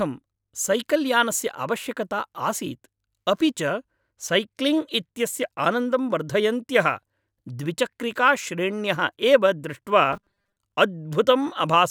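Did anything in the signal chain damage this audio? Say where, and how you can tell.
Yes. From 10.13 to 10.58 s the speech turns into a rigid, metallic buzz near 200 Hz that loosely follows the words. That is robotic sound from repeated short buffers, likely at the driver or buffer stage: a 5 ms chunk looped, filling about half the stretch.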